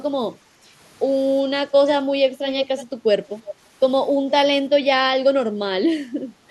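From 2.46 to 2.85 s, and briefly from 3.45 to 3.53 s, an echo leak brings back a copy of the speech 343 ms late, about 10 dB and then about 15 dB down, likely from a loudspeaker echo canceller letting far-end sound through. Unlike room reverberation, it is a distinct, delayed repeat.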